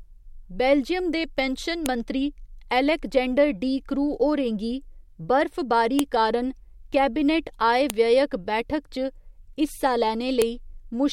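Separate WAV pieces were joined without stripping their headers, so a file header played as audio: the header bytes become samples, giving a sharp, loud click in this speech at 1.86 s (after "बेल्जियम दे पेंशन"), 5.99 s, 7.90 s and 10.42 s.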